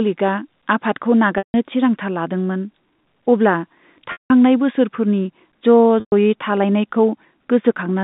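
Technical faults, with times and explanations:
1.38–1.54 s, 4.12–4.30 s and 6.00–6.12 s, packet loss with pitch repetition: a brief buzzy hold fades to silence, then a cross-fade; the receiver repeated the last pitch period over gaps of 160, 180 and 120 ms.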